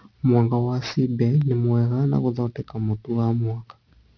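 Aliasing runs through the whole speech clip. It was downsampled to 11 kHz without an anti-alias filter, so content above 5.5 kHz folds back as false tones, roughly 25 dB down. Sibilants turn gritty and metallic instead of simply muffled, as plain band-limiting would leave them.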